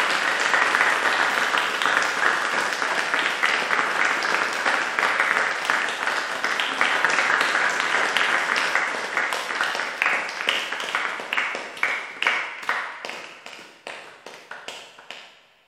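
No technical faults can be heard anywhere in this recording of sounds.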